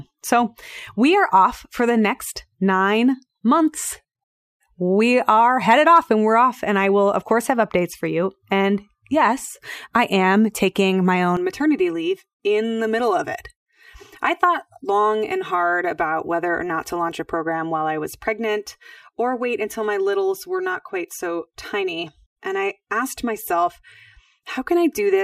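Speech clip with channel delay (comb filtering) from 11.37 s to the end: one channel lags around 3 ms before the mono sum, carving notches from near 200 Hz upward and leaving the sound hollow and phasey.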